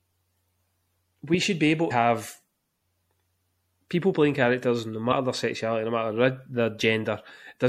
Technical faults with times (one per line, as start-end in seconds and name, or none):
0.00-7.69 MP3 compression
1.87-1.91 damaged data in a compressed stream
5.08-5.13 damaged data in a compressed stream